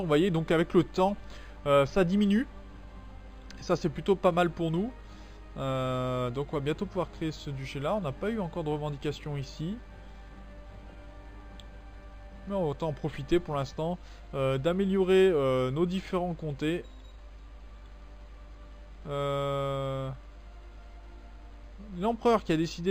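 Imaging from linear upsampling runs throughout: the sound was raised to a higher rate by joining samples with straight lines, pointing to an 11 kHz source. Highs are dulled toward 5.5 kHz, above which a faint mirrored copy, roughly 30 dB down, extends toward 11 kHz as a light metallic shimmer.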